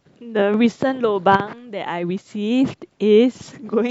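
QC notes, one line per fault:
No faults found in this speech recording. Nothing calls for a note.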